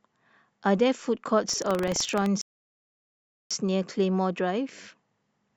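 Buffer tearing runs from 1.45 to 2.29 s: writer and reader cross inside each buffer, splicing a sliver of audio about a tenth of a second stale into the speech, giving a 23.4 Hz rattle that fits a 2048-sample buffer. A rebuffering stall follows from 2.41 to 3.51 s: playback starves and falls silent, then resumes exactly where it stopped, adding 1.09 s without losing anything.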